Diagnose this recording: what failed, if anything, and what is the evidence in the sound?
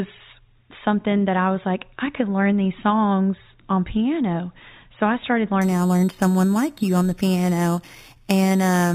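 From 5.61 s to the end of the speech there's imaging from sample-and-hold upsampling, so this failed at the rate-conversion stage. A bright metallic fizz rides along with the talker, sitting about 20 dB below the signal. It points to 8 kHz audio raised to 48 kHz by simply repeating each sample with no smoothing filter. That leaves mirrored spectra around every 8 kHz multiple, the lowest copy filling 4 to 8 kHz and moving opposite to the pitch.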